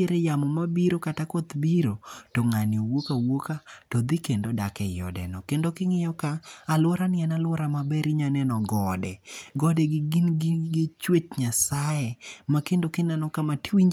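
No dropouts, clipping, glitches or other technical faults turn up anywhere in this speech recording.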